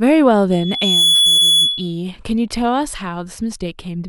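From 0.51 s to 2.02 s a loudspeaker feedback squeal rises. The microphone picks up its own loudspeaker, and at 3.4 kHz the loop gain passes one, so a single steady tone swells over about half a second to about 5 dB above the speech. That self-building single pitch marks it as feedback, not broadband noise or a hum.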